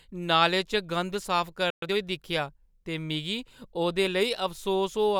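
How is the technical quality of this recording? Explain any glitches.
The recording has one brief interruption in the speech, followed immediately by a short hurried stretch as playback recovers.

At 1.70 s the speech cuts to silence for about 120 ms, ending at 1.82 s. This is a playback stall. The abrupt gap in mid-flow is likely the player running out of buffered data or having its output thread blocked, so nothing reached the output until it resumed.

From 1.82 to 1.94 s, just before "दिक्खेआ ते मिगी", the speech rushes forward at twice normal speed with its pitch unchanged. This is time-compressed catch-up. The player trims small slices and cross-fades them together to clear the backlog left by the stall.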